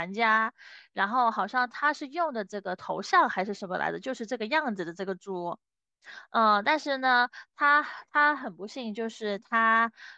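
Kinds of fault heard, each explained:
Nothing in this speech recording comes across as a fault; no dropouts, clicks, glitches or other transmission or processing trouble catch the ear at any point.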